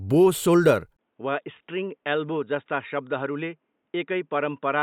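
At 0.97 s the sound drops out for about 20 ms. From then to the end, the speech is dull and boxy, with nothing above 3.8 kHz. It is roughly 10 dB quieter over faint new background noise. The likely cause is an input switched to a poorer device.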